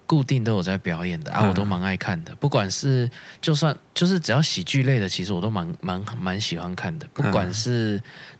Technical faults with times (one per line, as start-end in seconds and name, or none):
none